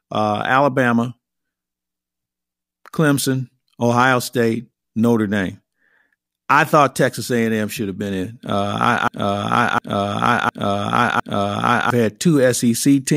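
At 9.08 s the speech falls into a broken-record loop that lasts until 11.90 s. A 0.71 s fragment plays four times back to back, each repeat identical. The likely cause is a stall in the player, encoder or stream, which kept resending the last piece it held, so the speech due in that span is lost. On a waveform or spectrogram, the same block pattern appears four times in a row.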